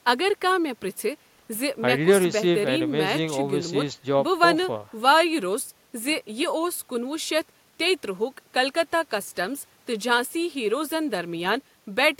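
No technical faults can be heard in this recording.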